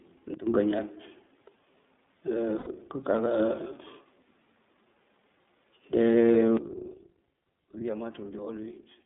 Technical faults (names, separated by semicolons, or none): iLBC codec; sudden gain jump; lost iLBC frames